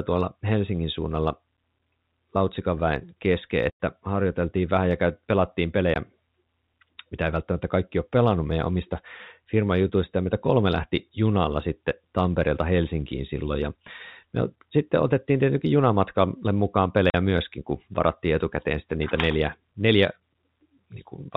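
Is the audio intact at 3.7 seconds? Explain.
No, there's packet loss filled with silence from 3.70 to 3.76 s, after "väen kesken": lost packets became a hard-edged gap before "harjoiteltiin vähän ja pelattiin".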